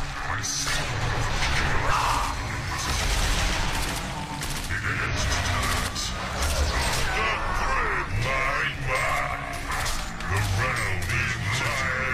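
From 1.01 to 5.88 s there is a doubled audio track: a second, likely slower capture path mixes in the same audio again. That copy trails by around 150 ms at roughly equal loudness, dry and full-band, so everything sounds smeared into a hard slapback echo that starts and stops abruptly.

Within that stretch, damaged data in a compressed stream makes the decoder misread frames and hunt for the next valid header, at 1.86 to 1.92 s and again at 5.07 to 5.13 s. Each is a brief glitch.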